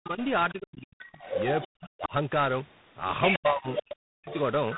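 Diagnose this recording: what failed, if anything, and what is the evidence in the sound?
Tandem speech coding is the first one, and it sits at the codec stage, running through the whole clip. The speech is rough and noisy, and the band stops at about 3.9 kHz. That points to three speech codecs in a row, with the last one sounding like G.726 at a low rate, around 24 kbit/s. Each coder had to work on the previous one's already degraded output, so the damage stacks up.

Then there's speech suppressed in double talk, back in call processing. The talker drops sharply, by something like 40 dB at the deepest point, from the start to 1.19 s, again from 1.75 to 2.13 s, and from 3.38 to 4.29 s. The talker dips and breaks up in pieces, about a second's worth in the first stretch. The likely cause is an echo canceller that couldn't tell the near talker from loudspeaker echo while both sides were talking, so it turned everything down.

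The third fault is the other side's voice leaking through, also from call processing. A second voice sits under the talker from 0.2 to 0.52 s, quite faint, around 20 dB down. It comes back much stronger from 1.12 to 1.68 s and from 3.23 s to the end, only about 5 dB under the main speech. That's likely loudspeaker playback getting into the mic without the echo canceller fully removing it, and it overlaps the suppression windows.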